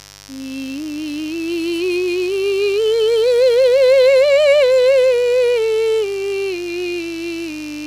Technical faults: mains buzz

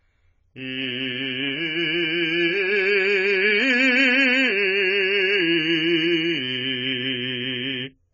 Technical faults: AAC compression

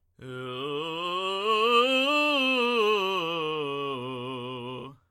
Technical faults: none

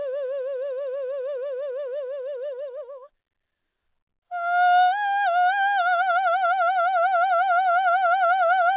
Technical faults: none

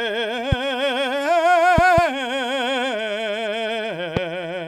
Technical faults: loud pop

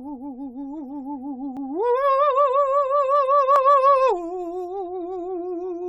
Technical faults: overlap between stream segments

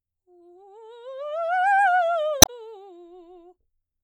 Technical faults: damaged data in a compressed stream

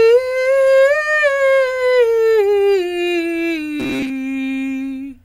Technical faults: robotic sound from repeated short buffers

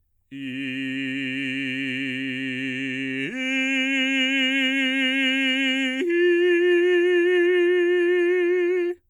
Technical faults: none

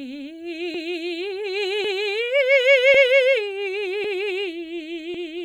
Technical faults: overlapping chunks

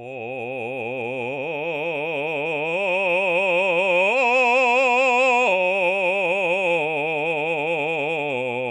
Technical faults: MP3 compression

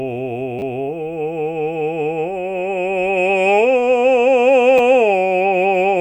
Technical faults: repeated buffer

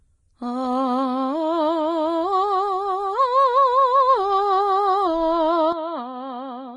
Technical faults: Vorbis compression; input switched to a poorer device

